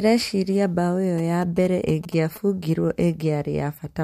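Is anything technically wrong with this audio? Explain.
Yes, there's GSM signalling burst interference from 1.18 to 2.38 s, right after "mbaũ ĩyo". A nearby 2G phone sending short radio bursts gets rectified by the audio circuit, giving a galloping dit-dit-dit of short 217 Hz buzzes, roughly 20 dB under the speech.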